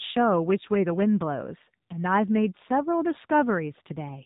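From start to end, the speech carries the sound of the AMR narrowband mobile codec. Everything is band-limited to 4 kHz, so sibilants lose their edge and the tone turns thin and boxy. The codec rebuilds the voice from a vocal-tract model fed by sparse pulses, and here the damage is plainly audible. Voiced sounds turn buzzy and synthetic, which fits a low mode of about 7.4 kbps.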